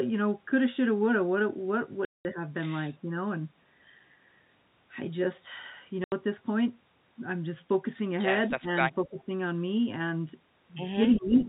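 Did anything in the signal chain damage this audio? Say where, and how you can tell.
Yes. At the network stage there is packet loss filled with silence. The audio drops to dead silence from 2.05 to 2.25 s (200 ms) and from 6.04 to 6.12 s (80 ms). Both lengths are whole multiples of 10 ms, which fits 10 ms packets. The receiver inserted zeros where packets were missing rather than concealing the gaps, so the speech is simply cut out.

In call processing, speech is suppressed in double talk. The level dips by about 5 dB from 2.89 to 3.11 s, by about 15 dB from 8.48 to 8.73 s and again from 8.89 to 9.3 s, and by about 10 dB from 11.16 to 11.39 s. The likely cause is an echo canceller that detected both sides talking at once and attenuated the near-end talker along with the echo it was trying to remove.

Also in call processing, there is an echo leak. A faint delayed copy of the speech, trailing it by 234 ms, appears at 9.18 to 9.24 s (about 35 dB below the speech), 11.14 to 11.19 s (about 20 dB below) and 11.4 to 11.44 s (about 25 dB below). 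These are short scraps confined to the same narrow telephone band as the rest of the G.711 audio. The likely cause is residual loudspeaker echo that the far end's canceller failed to remove and sent back down the line.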